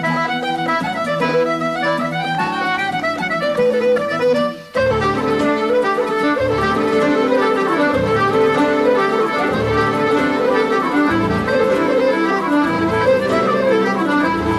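A doubled audio track begins at 6.58 s and runs to the end: a second, full-band copy of the sound trails about one and a half seconds behind, a few decibels quieter, starting abruptly and dry, most likely from a slower second capture path.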